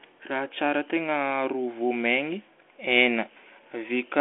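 The speech runs through a G.726 ADPCM path at 40 kbit/s, limited to the telephone band of 300 Hz to 3.4 kHz with nothing above 3.7 kHz, and any coding noise from it is faint at most.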